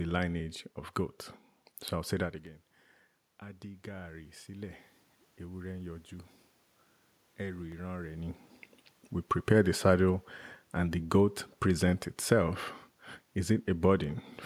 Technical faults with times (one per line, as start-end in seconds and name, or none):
2.47 dropped samples
3.39-4.83 automatic gain rising
7.72 dropped samples